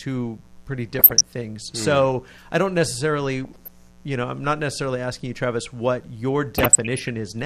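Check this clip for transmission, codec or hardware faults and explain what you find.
Two faults are present: a continuous mains buzz and three bursts of DAB burbling.

Mains buzz runs through the whole recording, built on 60 Hz. Sharp switching spikes twice per mains cycle, from a dimmer, rectifier or unshielded line, spray harmonics into the kilohertz range, giving a steady raspy buzz roughly 30 dB below the speech.

DAB burbling appears at 0.93–1.21 s, at 3.45–3.68 s between "I don't necessarily" and "you know I'm not", and at 6.58–7.10 s after "what your". Weak reception lets bit errors, at a small fraction of a percent, slip past error correction into the MP2 data, so corrupted samples put short blips of noise in single sub-bands and corrupted scale factors make sub-bands jump in level for up to a frame, producing burbling noise.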